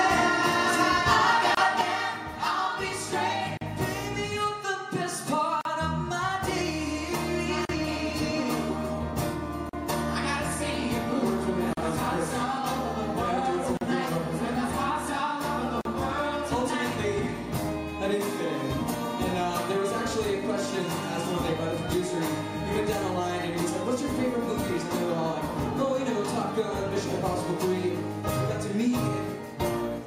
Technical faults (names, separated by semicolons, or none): gap at a join of encoded pieces; one channel drops out